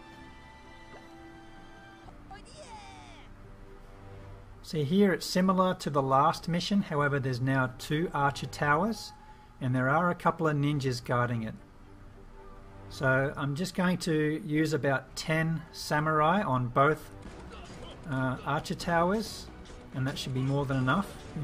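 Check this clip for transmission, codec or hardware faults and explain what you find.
Nothing here stands out as a transmission, codec or hardware problem; the audio just carries on steadily with no dropouts, glitches or odd artefacts to point to.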